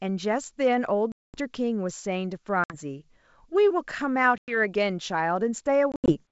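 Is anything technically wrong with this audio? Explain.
Yes, there is packet loss on an ADPCM call, carried over G.722 wideband coding. Packets went missing at 1.12 to 1.38 s (220 ms lost), 2.64 to 2.78 s (60 ms), 4.38 to 4.58 s (100 ms) and 5.92 to 6.13 s (120 ms, scattered, longest run 80 ms). Silence filled each gap, and the decoder's predictor and step size drifted from the sender's. Each gap is a hard-edged hole, and the speech returns with brief distortion before it resettles.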